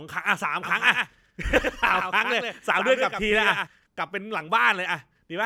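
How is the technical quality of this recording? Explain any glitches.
The recording has one clear glitch: a doubled audio track between 0.63 and 3.67 s. Throughout that span the speech is heard twice, a second full-band copy trailing the original by roughly a tenth of a second and only about 5 dB quieter. This likely comes from the signal being captured again through a slower path and mixed back in. Unlike an echo or room reverb, the copy repeats once, with no decay or added room colour, and it starts and stops abruptly.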